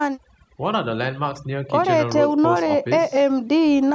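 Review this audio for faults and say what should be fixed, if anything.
Overdone noise removal runs throughout, leaving a lowered background that breaks up into twinkling specks. Unlike a noise gate, it mutes individual frequency bands rather than the whole signal. To prevent it, lower the noise-reduction strength so bands near the noise estimate are reduced gently rather than switched off.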